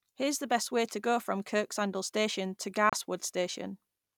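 It's a speech clip with one digital broadcast dropout, a short hole from about 2.90 to 2.93 s where the sound simply cuts out. The receiver muted after a bad or missing frame, and the gap fits a single lost frame of about 32 ms, so that bit of audio is gone.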